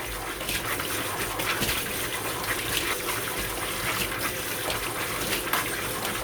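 No technical faults are audible.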